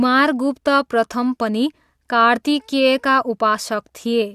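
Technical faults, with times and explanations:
No technical faults can be heard in this recording.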